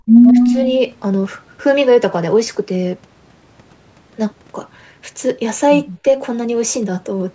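From 0.24 to 0.48 s, a faint copy of the speech trails the original by 160 ms, well below its level. This echo leak is likely from a loudspeaker echo canceller letting some of its pickup through. Overlapping it, from 0.31 to 0.6 s, the speech dips in patches by up to about 10 dB, which is speech suppressed in double talk: the canceller likely turned everything down while both sides spoke. At 5.88 to 5.99 s, a much quieter echo leak repeats, again delayed by 160 ms.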